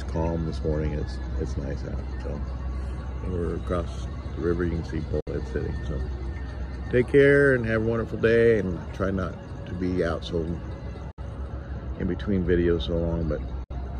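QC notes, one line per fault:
5.20 s, 11.11 s, 13.64 s: Bluetooth dropout. Each event is a gap of about 70 ms where the output goes silent, then the sound returns as though it had kept playing, so roughly 60 ms of material is simply missing rather than delayed. The identical length points to a likely wireless link failing to deliver packets in time, with the loss fitting about three packets dropped per event.
11.35 s to end: de-emphasis applied wrongly. From this point the top end rolls off smoothly, sitting about 11 dB lower at 10 kHz relative to 1 kHz, which makes the sound dull and muffled. This is a treble-cut filter meant to reverse pre-emphasis acting on audio that never had the boost or applied a second time, so the high-frequency loss is not compensated anywhere. The dropout at 13.64 s falls inside this section.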